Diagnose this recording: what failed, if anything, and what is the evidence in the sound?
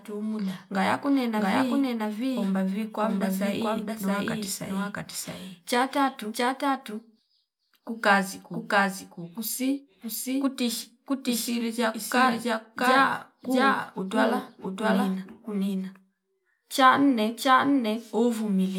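Doubled audio track, present for the whole clip: every stretch of speech is followed by a second, identical copy trailing by roughly 0.7 s, at about the same level as the original. The copy is full-band, with no decay, reverberant tail or room colouring, which rules out an acoustic echo. The likely cause is at the capture or routing stage, where the same signal is recorded twice and a slower second path mixes it back in late.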